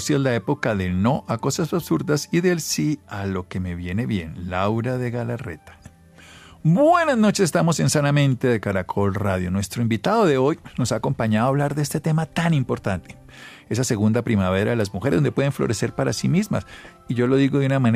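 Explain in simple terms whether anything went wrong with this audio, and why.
Nothing went wrong here that I can hear, so there's no problem to explain and the audio can be taken just as it sounds.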